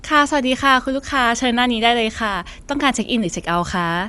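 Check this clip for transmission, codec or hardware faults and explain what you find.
Yes, one fault runs throughout this speech: Dolby Digital compression, likely from a low-bitrate AC-3 stream. Nothing is heard above about 11.6 kHz, and the dull sound has a rough, fluttering noise where the decoder filled empty frequency lines with dither.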